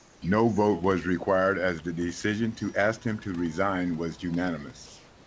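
From 0.00 to 0.22 s and 4.86 to 5.27 s, comfort noise replaces the background, likely from discontinuous transmission. It sounds like a featureless hiss and shows as an even, textureless spectrogram band.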